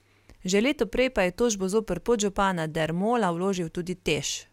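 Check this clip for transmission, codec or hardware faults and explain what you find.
No faults detected here.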